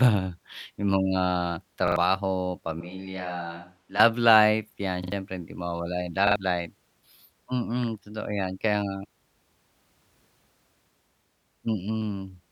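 At 1.88 to 1.96 s the speech catches in a repeated buffer: a fragment of about 43 ms, which fits a 2048-sample buffer, plays three times in a row with a hard join at each restart. Fresh audio failed to reach the output in time, so the device replayed what it already held. The result is a short mechanical stutter, and around a tenth of a second of the real speech never arrives.

From 2.81 to 3.99 s the sound abruptly turns hollow and roomy, thinner in the low end and about 10 dB quieter, with background noise rising to roughly 35 dB below the speech. Both the change in and the change back are instant. This is likely a switch to a distant microphone: the close pickup dropped out and a far-off one, such as a camera's, carried the signal for that stretch.

The repeated buffer returns at 5.04 to 5.12 s, just before "hindi mawawala yung", and again at 6.27 to 6.36 s, just after "hindi mawawala yung". 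Each time the same roughly 43 ms chunk sounds three times, giving the same brief stutter and the same loss of about 100 ms of speech.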